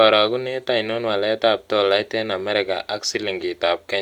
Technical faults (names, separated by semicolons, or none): none